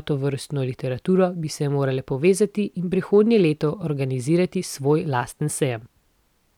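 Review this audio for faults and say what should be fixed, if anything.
Nothing to fix: no technical faults are audible anywhere in the recording.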